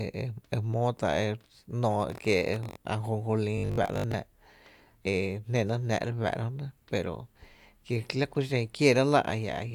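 From 3.58 to 4.14 s there is robotic sound from repeated short buffers. A rigid 50 Hz buzz follows the speech only roughly, likely from about half being repeated 20 ms chunks.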